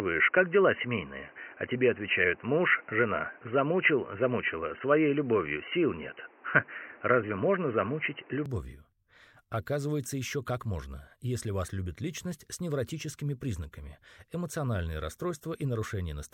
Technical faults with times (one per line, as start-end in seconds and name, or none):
0.00-8.46 input switched to a poorer device